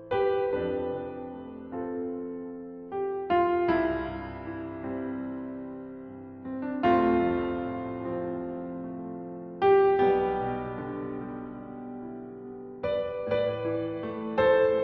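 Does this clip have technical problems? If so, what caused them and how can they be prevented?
No, nothing here stands out as a technical problem, so there's nothing that needs fixing or preventing.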